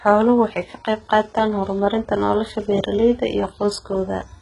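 Throughout the speech, the treble sounds gritty and synthetic, and nothing reaches above 11.1 kHz. The cause is likely HE-AAC compression, which rebuilds the top band from copied lower bands. The heavy damage fits a very low bitrate near 12 kbps.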